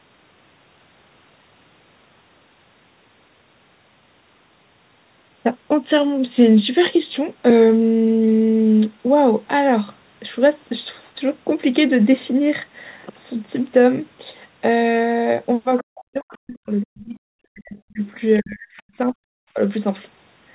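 A speech recording, band-limited to 4 kHz, which fits a narrowband G.711 call path. From 15.78 to 15.83 s a faint scrap of the other side's voice leaks through, around 20 dB below the talker. Residual loudspeaker echo that the echo canceller missed is the likely cause. Speech is then suppressed in double talk. The talker's level drops by as much as about 40 dB from 15.82 to 18.02 s and from 18.39 to 19.19 s. A shallower dip of about 10 dB follows at 19.54 to 19.59 s. The echo canceller likely turned down both sides at once.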